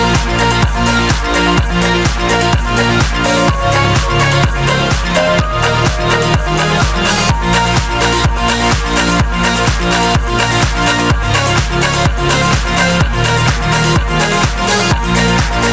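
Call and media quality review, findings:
Gain pumping, whole clip: gain ducks by around 5 dB under every loud hit. Level feels squashed. Likely input gain set way too hot, with a fast limiter or compressor clamping down on each peak. Call mic processing audible too: lowest bass trimmed, nothing above 8 kHz.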